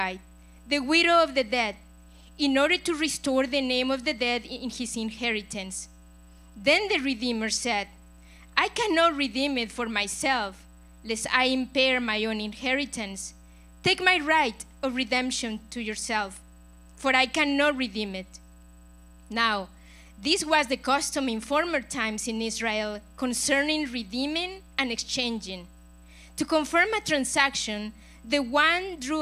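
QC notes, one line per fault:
No faults found on this pass; nothing to log.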